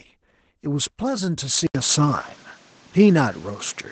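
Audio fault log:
throughout: Opus voice compression. The speech carries nothing above 9 kHz and sounds plainly coded: muffled, slightly hoarse and robotic. This points to the SILK linear-prediction coder at a low rate, about 12 kbps in wideband mode, coding the excitation coarsely.
1.67–3.91 s: input switched to a poorer device. After an 80 ms silence the band narrows to 8.1 kHz, the level shifts by roughly 5 dB, and new noise appears about 30 dB below the speech. The likely cause is the input moving to a different microphone with its own tone and noise.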